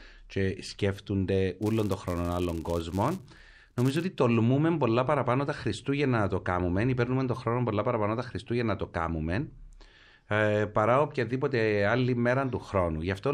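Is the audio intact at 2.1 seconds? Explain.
No. At 2.1 s the sound sits inside a filter restarted on every block fault running from 1.63 to 4.06 s, between "και σκέφτονται" and "τολμούμε πολλά παραπάνω τα". The filter drops its memory at each block boundary and starts again from silence, so every block opens with a small transient. These ticks repeat at 188 Hz, which fits a 256-sample buffer, and form a buzz that tracks the speech level. A waveform shows evenly spaced spikes, and a spectrogram shows dense vertical striping with harmonic lines at multiples of 188 Hz.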